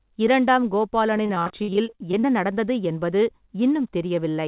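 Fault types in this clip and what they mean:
Repeated packet loss (robotic sound): from 1.17 to 2.24 s the speech breaks into a rapid string of short holes, more than a dozen, the longest about 51 ms. Each hole is patched by stretching the last bit of sound forward, so roughly a third of that stretch is synthetic fill. The fills and dropouts alternate so quickly that the speech turns choppy, heard through a narrowband call path with nothing above 4 kHz.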